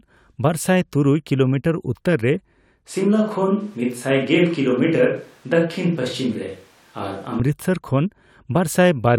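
From 2.89 s to 7.40 s the speech turns abruptly roomy and hollow with thinner bass, likely a switch to a distant microphone. Level holds steady, but a noise floor roughly 35 dB down fills the gaps. The spectrogram shows weaker lows and reverberant smearing.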